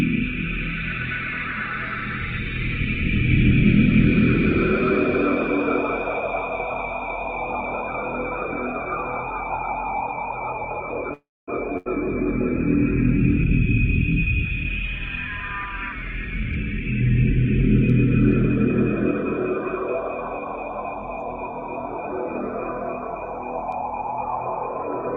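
A recording of everyday sounds, with two network faults in close succession. From 11.13 to 11.50 s the audio stalls. The last sound trails off as a brief fading continuation, then about 240 ms of silence, before resuming exactly where it left off. This is a call audio freeze, likely from packets delayed in transit that emptied the jitter buffer. Roughly 341 ms is inserted and nothing is lost, so everything after runs that much later. At 11.78 to 11.87 s a burst of packet loss follows. The receiver fills about 80 ms by stretching and fading the preceding sound, then jumps ahead, so the 80 ms that should have played there is missing.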